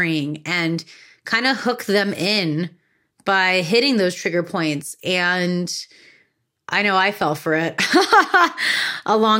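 No technical faults can be heard anywhere in the recording.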